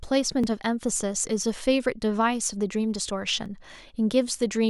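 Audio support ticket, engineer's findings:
Brief stutter-clicks at 0.44, 1.44, 2.45 and 3.46 s, one per second. Overlapping chunks in the chunking stage: each 1 s block starts 7.07 ms early, replaying that sliver at every join.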